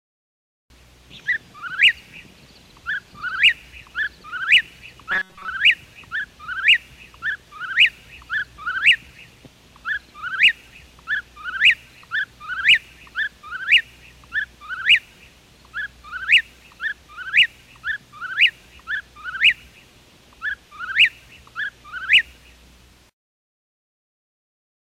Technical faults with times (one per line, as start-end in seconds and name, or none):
5.11-5.48 robotic sound from repeated short buffers